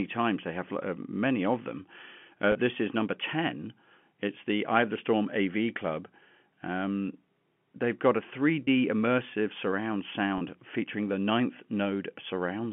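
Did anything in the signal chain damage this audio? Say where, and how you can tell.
Yes, packet loss with pitch repetition at the network stage. There are three 30 ms gaps: at 2.52 s, just before "this is number"; at 8.64 s, between "they've got a" and "immersive surround"; and at 10.38 s, between "immersive surround" and "featuring the ninth". Each gap sounds like a brief held, buzzy stretch, which fits a single lost packet. The receiver concealed each loss by repeating the last pitch period across the gap, over the G.711 telephone path's narrow 150 Hz to 3.4 kHz band.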